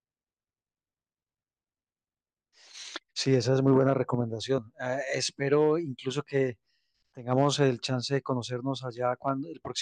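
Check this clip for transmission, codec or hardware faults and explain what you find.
The speech signal sounds continuous and intact throughout, with nothing audible that points to a fault anywhere along its path.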